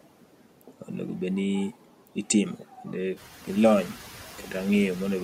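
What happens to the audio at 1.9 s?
At 1.9 s, as across the whole clip, a noise suppressor is treating steady background sound as noise and pulling those bands down frame by frame, by about 12 dB. The background dips in the gaps of the speech and swells back up beneath it, so the floor pumps instead of holding steady. The room noise, which only climbs by about 10 dB around 3 s, is still at its lower level here.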